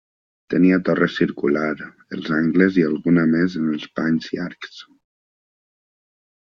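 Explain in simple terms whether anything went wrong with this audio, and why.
Nothing went wrong here that I can hear; the recording runs along without any dropouts, glitches or other technical problems getting in the way.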